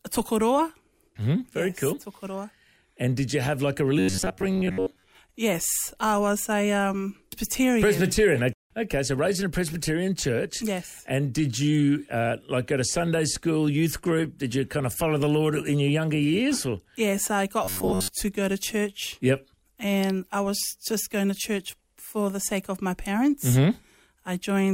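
Robotic sound from repeated short buffers affects the audio from 3.99 to 5.08 s and from 17.64 to 18.1 s: a rigid metallic buzz at 93.8 Hz, roughly half, then most, of the material replaced. The likely cause is starved playback looping about 10.7 ms fragments.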